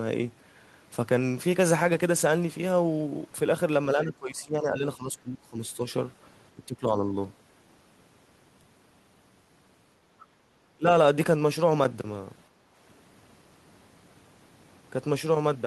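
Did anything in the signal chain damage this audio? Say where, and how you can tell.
Yes. Speech suppressed in double talk at 3.96–5.79, 6.55–6.86 and 10.76–10.87 s: the talker drops roughly 15–20 dB, likely the echo canceller ducking both sides.

The other side's voice leaking through at 10.19–10.26 s is a faint scrap about 30 dB under the speech, likely loudspeaker echo the canceller missed.

Background gated by the echo canceller at 12.49–12.71 s: room sound dips about 7 dB while the far end plays, then comes back once the canceller releases.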